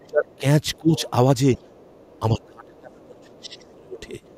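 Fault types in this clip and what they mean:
Other side's voice leaking through: at 0.00–0.38 s, 0.73–1.10 s, 1.54–2.46 s and from 3.25 s to the end, a second voice sits faintly under the talker, mostly around 35 dB down and more noticeably around 20 dB down in the 0.73 s stretch. The far end is likely playing from the talker's loudspeaker back into the microphone, with the echo canceller failing to remove all of it.
Speech suppressed in double talk: at 0.06–0.44 s, 0.79–0.94 s and 2.32–4.02 s, the talker's own voice sinks by roughly 20 to 30 dB, deepest in the long final stretch, while the leaked voice is also present. The likely cause is the echo canceller being unable to tell the talker from the loudspeaker echo when both sound together, so it turns everything down and takes the talker's speech with it.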